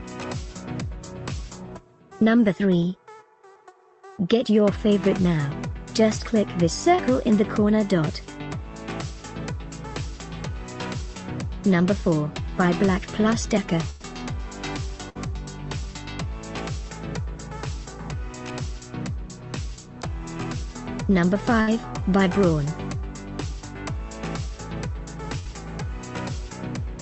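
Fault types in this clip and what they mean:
Short concealed packet loss: Around 6.95 s roughly 20 ms of audio never arrived in time, so the receiver patched about 25 ms by carrying the previous sound forward and blending back into the real signal. You get a quick smear or wobble, and anything very brief there can simply drop out.
Burst of packet loss: Four longer gaps, at 13.90, 15.09, 21.61 and 25.39 s. The receiver stretched the last sound across each hole, fading it as it went, so you hear a held buzz or fading hiss. The first patch runs 100 ms and the other three about 60 ms each. Then playback jumps ahead, with roughly the same amount of real audio gone each time.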